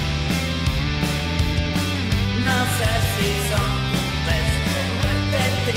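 No technical faults can be heard anywhere in the clip. Nothing in the audio points to a dropout, glitch or other failure in the chain that carried it.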